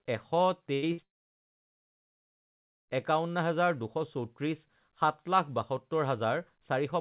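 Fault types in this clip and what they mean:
Burst of packet loss: Two short stretches of audio never made it to the receiver, so it filled the holes itself by stretching out the last bit of sound and letting it fade. The first hits around 0.74 to 0.84 s and loses about 80 ms. The second, at about 0.92 to 1.00 s, loses about 60 ms. In both you hear a brief smeared hold, then the speech picks up a little further along with that slice gone.
Long network dropout: From about 1.04 s to 2.90 s the sound is concealed only for a brief moment and then just goes silent for roughly 1.8 s. That pattern points to the stream likely having stopped arriving altogether rather than losing a few packets. When the speech returns, everything from that stretch is missing, all of it heard through a narrow band with nothing above 4 kHz, which fits G.711 telephone coding.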